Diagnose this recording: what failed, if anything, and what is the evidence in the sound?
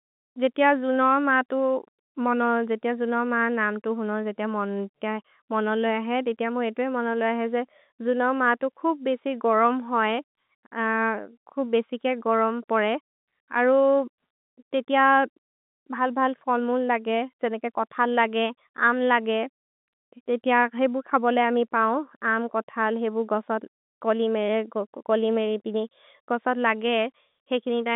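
Nothing in this speech recording points to a failed stage. What can be heard is the G.711 telephone coding doing its job: the sound sits in the line band of roughly 200 Hz to 3.7 kHz, with nothing above about 3.8 kHz, as expected for a 64 kbps mu-law call.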